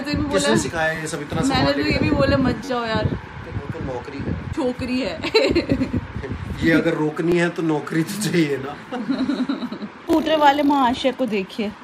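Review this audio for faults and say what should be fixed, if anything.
A short buzz from 2.65 to 2.69 s and single clicks at 7.32 s and 10.13 s are a repeated buffer. Fresh audio arrived late, so a 10.7 ms block (consistent with a 512-sample buffer) replayed with hard joins, four extra times first and then once each. A larger output buffer or higher audio-thread priority would prevent it.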